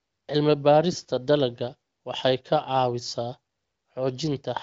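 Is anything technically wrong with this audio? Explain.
No, nothing's technically wrong here; it's speech carried over the AMR wideband (HD Voice) codec at 23.05 kbit/s, and the expected lack of content above about 7.5 kHz is simply how that path works.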